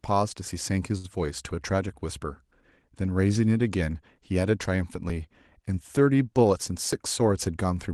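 A speech recording, heard over a WebRTC-style call path whose Opus coding is audible as a top end cut off around 12 kHz and coding grain, consistent with roughly a 20 kbps setting. From 0.97 to 1.06 s there is a short stall from a late packet. The sound at that point is held and stretched for about 65 ms with a faint buzzy sameness, and then the speech resumes exactly where it left off. Unlike a dropout, nothing is skipped and nothing goes silent. The stall only adds delay, which is why the stretched sound has a smeared, sustained quality rather than a gap. At 5.10 s and again at 6.93 s the audio jumps abruptly, each time losing only a few milliseconds of sound. They are likely dropped buffers (overrun), where samples were overwritten before the program collected them and the surviving audio on either side was butted together. What separates these from the late-packet stall is the missing material: the sound leaps forward instead of being held, and the join is abrupt rather than a drawn-out tone. 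From 7.22 to 7.64 s a jitter buffer speed-up plays the speech at about 110% of normal rate, trimming around 50 ms in total by repeatedly cutting out tiny pitch-period slices. The pitch stays the same but the delivery sounds rushed, which distinguishes it from a resampling or clock error, where pitch would rise along with speed.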